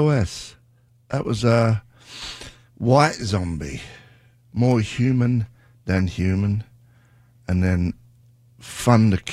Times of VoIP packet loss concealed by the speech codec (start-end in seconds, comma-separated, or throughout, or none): none